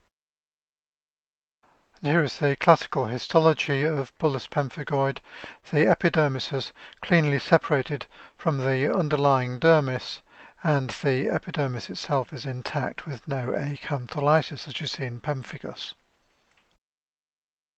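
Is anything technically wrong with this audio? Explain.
Yes. Three related timing faults run through the clip.

Clock drift between sender and receiver is present for the whole clip. The sender's audio clock runs slower than the receiver's, by roughly one and a half percent. Audio therefore arrives a little slower than it is played out, and the jitter buffer keeps draining. The receiver has to keep compensating. This causes the small timing corrections described below, spread unevenly through the recording.

Repeated timing corrections occur from 0.10 to 4.19 s and again from 6.96 to 17.57 s. In both stretches the receiver plays at about 98% speed, repeating short pieces to keep the buffer from running dry. This adds roughly 70 ms in the first stretch and roughly 200 ms in the second. The edits are small and irregularly spaced, so at most they come across as a faintly unsteady tempo or slight hiccups.

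A short stall from a late packet happens at 5.60 to 5.66 s. A packet arrived late, the buffer emptied, and the receiver stretched the last sound by 25 ms until the packet came in. Playback then resumed where it left off, so nothing is missing. The held sound has a slight buzz or dip, and the overall delay increases by 25 ms from this point.

Underneath these faults, the audio carries Opus coding texture and is band-limited at 8 kHz, which fits a 32 kbps WebRTC call path.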